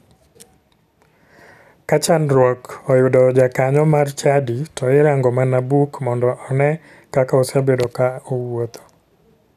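No technical faults can be heard anywhere in the speech recording.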